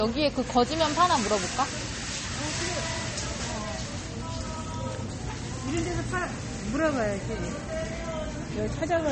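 A recording of everyday sounds, with a hard ceiling near 8.4 kHz and the artefacts of heavy MP3 compression running through the whole clip. This is likely low-bitrate audio saved at a high bitrate: damage that fits a first pass at around 32 kbit/s, later re-encoded at a much higher rate. Unlike a single low-bitrate file, the clean high-rate second encoding adds almost nothing of its own, so the extra size restores none of the lost top end or detail.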